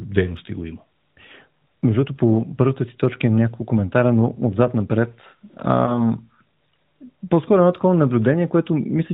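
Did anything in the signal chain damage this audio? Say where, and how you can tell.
Yes. One lost AMR speech frame, a network-stage fault: after "коментара но отзад напред", near 5.84 to 6.12 s, a single 20 ms frame failed its check. The decoder refilled it from the last good pitch and vocal-tract settings, leaving a brief dip or warble in the narrowband sound.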